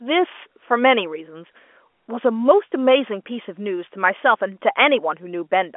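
No technical faults are present.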